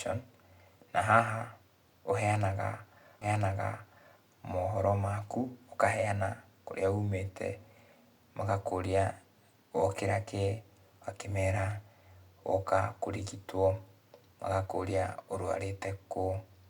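A stream segment repeated in this speech clip, from 3.21 s to 4.21 s: one second of the programme plays a second time, adding 1.0 s to the running length. The player fetched or queued the same chunk of the stream twice, so playback jumps back and replays it, with a small blip marking the seam at the jump. The speech then carries on with "mohoro maku ũkaheana kũrĩa".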